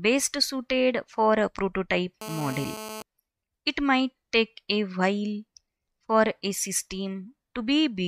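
From 2.21 to 3.02 s there's a hard, raspy GSM phone buzz sitting about 12 dB below the audio. It's a steady 217 Hz tone with lots of harmonics, typical of a nearby 2G handset on a call whose bursts get rectified by the audio circuitry.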